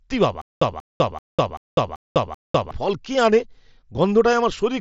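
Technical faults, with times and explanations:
0.42–2.71 s, stutter with silent gaps: one 186 ms fragment repeats six times at a steady 386 ms pace, with 199 ms of digital silence between, until "ফল কে আনে"; likely a stalled stream replaying its last fragment. The repeats set it apart from plain dropouts.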